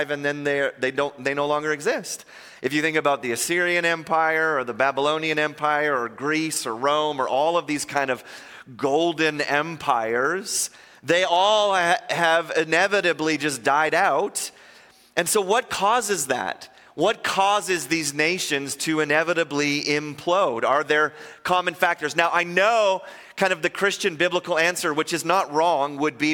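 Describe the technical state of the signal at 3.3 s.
At 3.3 s the signal is intact, with no dropout, clipping, glitch or other technical fault to be heard.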